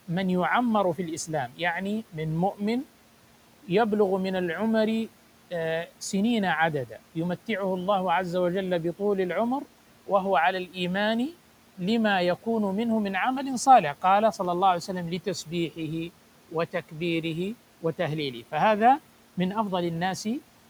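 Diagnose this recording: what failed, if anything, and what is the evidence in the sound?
Speech cut by the noise suppressor, in call processing: it took quiet speech for noise at 1.48–1.6 s and 10.66–10.77 s, dipping about 12 and 11 dB. The sound is swallowed, not silent as in a dropout.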